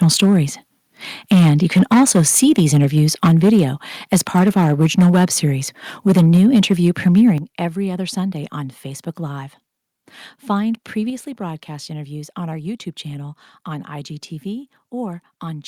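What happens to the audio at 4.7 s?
Microphone overload runs from 4.13 to 5.25 s. Peaks are flattened, adding harsh crackle. The input level was likely about 8 dB too high for the converter.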